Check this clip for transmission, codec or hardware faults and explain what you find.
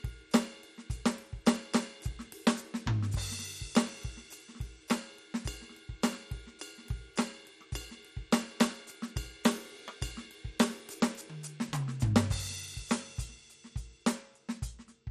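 The music carries one fault for its whole length: a dull, gurgling, granular quality with nothing above 14.3 kHz, the sound of MP2 compression. The likely cause is MPEG Layer II coding at a starved rate, fitting roughly 64 kbps, where upper sub-bands switch off and flicker while the remaining bands are coarsely quantised.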